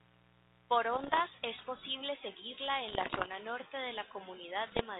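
From 0.0 to 2.01 s a steady, raspy 60 Hz mains buzz sits about 30 dB below the speech. Sharp switching spikes from a dimmer, rectifier or missing shield spread harmonics upward.

Bit errors on an ADPCM link appear at 0.93 to 1.21 s, overlapping it, then 2.88 to 3.29 s just before "norte de", and 4.66 to 4.82 s. Flipped bits, at a rate of a percent or two, throw off the decoder's step size and predictor, so each one rings on as pops and rough bursts with brief level jumps. The underlying narrowband ADPCM, consistent with 32 kbit/s G.726, adds only light coding hiss.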